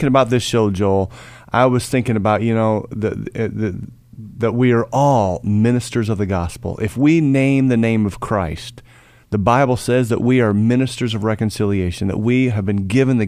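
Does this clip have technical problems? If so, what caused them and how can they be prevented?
No, nothing in this speech clip stood out as a technical problem on listening, so there is nothing here that needs preventing.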